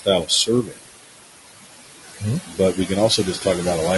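Noise suppressor artifacts run through the whole clip. The room noise sits about 8 dB below the speech. The suppressor pulls it down by about 18 dB wherever it judges a band to hold only steady noise. It works frame by frame, so the background sinks in the gaps between words. It then comes back up underneath them as the speech returns. The floor keeps pumping with the speech.

Low-delay AAC compression is also heard throughout. The codec damage is plainly audible. The speech has a rough, grainy texture. There is noise filling the spaces between the harmonics. The top band sounds lowered or synthetic. This is likely AAC-ELD, the low-delay coder of video calls. Its window and frame size keep delay short at the cost of detail. The damage fits a rate around 32 kbps.

Speech cut by the noise suppressor appears three times. The suppressor mistook parts of the speech for noise and turned them down. 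Between 0.25 and 0.84 s, about 300 ms in total is affected. The deepest drop there is about 20 dB. From 2.46 to 2.9 s, about 200 ms dips, by up to about 13 dB. From 3.1 to 3.46 s, about 100 ms drops, by up to about 10 dB. In each stretch the affected sounds come out swallowed or faint.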